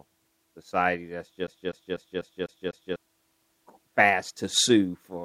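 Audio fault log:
1.47–2.96 s: CD stuck on one turn. The speech catches on a single fragment about 0.25 s long and plays it six times in a row. Each repeat ends in a brief mute before the same slice starts again. A scratch is throwing the laser back one track at the same point on every turn of the disc. That gives the fast, even stutter of a skipping CD, locked to a 248 ms cycle.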